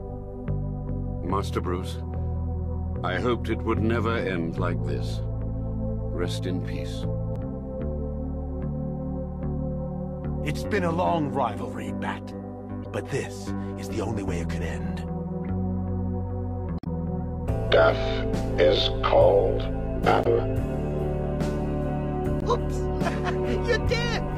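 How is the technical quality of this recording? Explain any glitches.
The recording has five short glitches, all from damaged data in a compressed stream. They occur at 7.33–7.37, 12.82–12.86, 16.76–16.87, 20.22–20.26 and 22.39–22.43 s. Corrupted bytes break the decoder's frame sync, so it misreads frames before finding the next header. Each glitch is a brief chirp or blip lasting about 40 ms, except the longer one near 16.8 s, which lasts about 110 ms.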